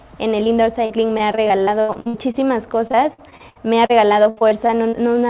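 Short concealed packet loss at 0.44 to 0.48 s: about 20 ms of audio failed to arrive in time, and the receiver filled the hole by extending the preceding sound, voiced material from its pitch and unvoiced material as shaped noise, before crossfading back to the real signal. It registers as a brief smear or wobble, and anything very short in that spot can drop out.

Repeated packet loss with robotic sound runs from 0.86 to 2.36 s and again from 2.88 to 4.95 s. Over these stretches holes arrive one after another, roughly a dozen or more in each, the longest about 77 ms and 72 ms. About a quarter of the first stretch and a fifth of the second is patched-in sound. Each patch is followed soon after by the next hole, so the result is choppy, with fragments missing. Through all of it the audio stays band-limited, with nothing above 4 kHz, which fits a G.711 mu-law call path.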